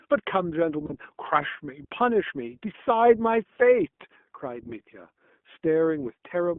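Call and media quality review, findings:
iLBC codec, whole clip: narrowband speech, nothing below about 200 Hz or above 3.4 kHz, with a rough, slightly synthetic edge that is plainly audible. It fits iLBC's 20 ms mode at 15.2 kbps. Unlike generic low-bitrate smearing, it shows frame-independent excitation coding.

Lost iLBC frames, 0.86–0.94 s and 2.76–2.79 s: brief held, buzzy vowel-like tone where the sound should move on. This fits two frames, then one frame, of 20 ms lost. The decoder repeats the last pitch cycle with noise. Unlike a dropout or a click, there's no silence, and speech recovers instantly afterwards.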